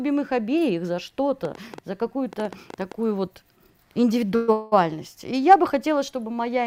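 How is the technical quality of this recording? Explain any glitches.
Two kinds of fault affect the recording: a burst of clicks and a pair of short freezes.

From 1.45 to 2.93 s, a train of clicks, likely interference or a faulty connection, injects about ten similar pulses at an uneven 7.5 per second. They tick roughly 5 dB above the sound.

At 4.35 to 4.50 s and 4.52 to 4.74 s, a call audio freeze occurs, likely from delayed packets draining the jitter buffer. The receiver stretches the last sound for 126 ms, then 198 ms, as a fading buzz or hiss. Nothing is lost, but the audio resumes later.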